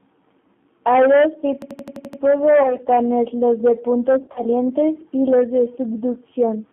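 The G.729 codec shapes the whole clip. This 8 kbit/s VoIP coder rebuilds speech from a vocal tract filter, a pitch predictor and a few pulses per frame rather than the waveform itself, so the speech comes through intelligible but plainly rough and synthetic. The line band runs from 150 Hz to 3.5 kHz, cutting the low body and the high sibilance and giving the narrow telephone sound.

A system hang loop runs from 1.62 to 2.22 s. The machine or its driver stalled while the sound hardware kept replaying the same stretch of its ring buffer. An 85 ms fragment repeats seven times at 11.7 Hz, which fits a 4096-sample buffer. The result is a rapid machine-gun stutter rather than a steady buzz. Essentially no audio is skipped, and the sound resumes where it stopped.

VoIP packet loss concealed by the speech codec first appears from 2.63 to 2.76 s. About 20 ms went missing, which fits a single lost packet. 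The decoder filled the gap by extending its last pitch and filter settings at falling gain. Because each frame builds on the previous one, the sound stays weak and distorted for a short while after real data returns.

The same concealment recurs from 4.19 to 4.41 s, this time more severely. About 100 ms of audio is lost across a 160 ms span, with the longest unbroken gap lasting 40 ms. The repeated extrapolation turns the sound into a buzzy, fading tone or coloured noise.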